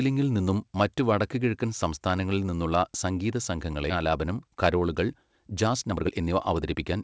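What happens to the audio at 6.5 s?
At 6.5 s the speech is inside a jitter buffer speed-up that runs from 5.52 to 6.94 s. The receiver's buffer had built up more audio than it targets. To shrink the backlog, it cut out short slices one or a few pitch periods long, again and again. About a third of a second goes missing. The speech plays at roughly 121% speed with its pitch unchanged, so it sounds hurried.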